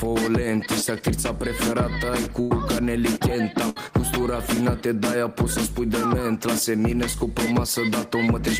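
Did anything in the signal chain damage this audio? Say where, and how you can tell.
Yes, there's a burst of packet loss in the network stage, in two spots. At 2.41 to 2.51 s the receiver papers over about 90 ms of missing audio by stretching the last sound and fading it, so you get a held, decaying tone or hiss instead of real content. At 3.69 to 3.88 s it happens again, with roughly 65 ms of fill covering about 60 ms that never arrived, and the audio picks up further along with that chunk gone.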